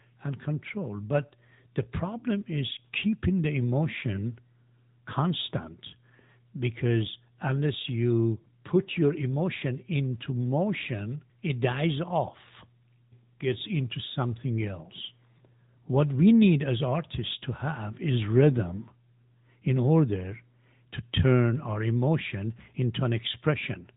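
AMR narrowband mobile codec damage runs throughout: the speech was squeezed through a mobile vocal-tract model, which fits a 10.2 kbps mode, cutting everything above 3.8 kHz and leaving plainly audible buzzy, synthetic edges.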